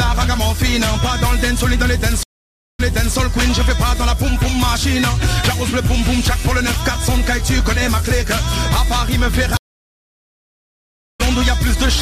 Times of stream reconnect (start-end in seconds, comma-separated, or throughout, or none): 2.23-3.16, 9.57-11.21